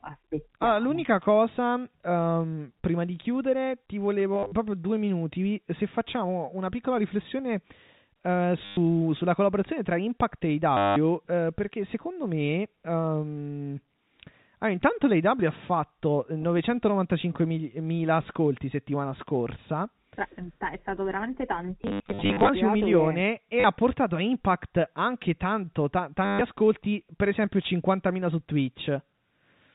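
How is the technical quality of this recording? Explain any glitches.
The speech has six short stutter glitches over a G.711 telephone-band path that caps the sound at 4 kHz. Packet loss with last packet repeated occurs at 4.34–4.52 s (between "prima di chiudere ti" and "proprio due minuti"), 8.65–8.77 s (before "sulla collaborazione tra"), 10.77–10.96 s, 21.83–22.49 s, 23.6 s (between "un milione che e" and "ha portato a"), and 26.25–26.41 s. Replayed audio fills each gap, giving a robotic buzz that fits 10 ms packets. The 21.83 s event is the longest and most broken up.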